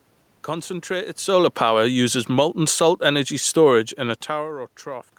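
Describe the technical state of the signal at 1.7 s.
At 1.7 s you're inside an automatic gain falling stretch that runs from 1.23 to 4.6 s. The gain control decided the input was too loud or its background noise too strong and started easing its gain down, losing about 6 dB by the end. At 1.7 s that slide has just begun, so the speech is drifting quieter, and the room noise sinks right along with it, which gives away that it's the gain moving rather than the talker.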